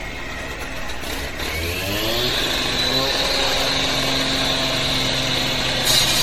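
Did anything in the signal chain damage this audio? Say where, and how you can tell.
Yes. USB whine enters at the analogue power or ground wiring. A fixed 1 kHz whine runs throughout, with harmonics peaking near 20 kHz, about 30 dB below the audio. That matches USB frame current.

Generation loss in the codec stage. Nothing survives above 16.4 kHz, and the audio sounds swirly and hollow. The likely cause is around ten passes through 64 kbit/s MP3.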